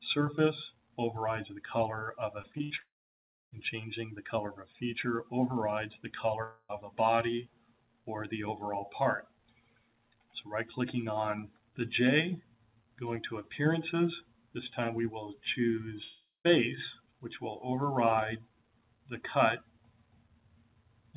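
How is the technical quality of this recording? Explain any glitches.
The recording has audible network glitches: a choppy patch that runs straight into a gap, then two shorter gaps later on. It is also band-limited to nothing above 4 kHz, which fits a G.711 A-law call path at 64 kbps.

Repeated packet loss (robotic sound) runs from 2.42 to 2.80 s. Five short holes, the longest 65 ms, are each patched by stretching the previous sound, so about a third of the span is filler. This gives a choppy sound with pieces missing. Unlike a single dropout, the sound keeps breaking and resuming within a fraction of a second.

Long network dropouts occur at 2.80–3.53 s, 6.43–6.71 s and 16.03–16.46 s. Each begins with a smeared continuation of the last sound, which fades into near-silence lasting about 650 ms, 60 ms and 200 ms respectively. The audio then resumes with a piece missing, likely because no packets arrived for that stretch. 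It is one sustained hole rather than rapid chopping.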